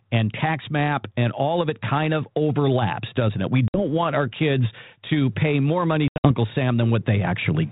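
At 3.68 to 3.82 s before "want our kids to", and 6.08 to 6.32 s after "to pay more money", packet loss on an ADPCM call leaves hard-edged silent gaps: blank spectrogram columns, flat waveform. The mistracked decoder then resumes slightly distorted, settling within tens of milliseconds.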